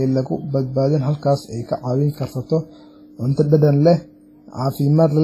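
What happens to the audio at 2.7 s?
At 2.7 s the speech sits inside damage that runs through the whole clip, most likely from WMA compression at a low bitrate, which fits something like 24 kbps. The transform coder spreads its quantisation noise over long blocks and zeroes weaker spectral lines, so the voice rings and smears, with a washy hiss that swells and fades with each syllable. The damage is heavy, and nothing remains above 15.2 kHz.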